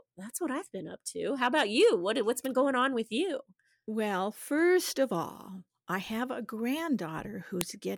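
At 7.61 s a sharp, loud click cuts through the speech: a file header played as audio. A WAV piece was joined or streamed without stripping its header, so those few dozen bytes were read as samples, producing a snap unrelated to the signal.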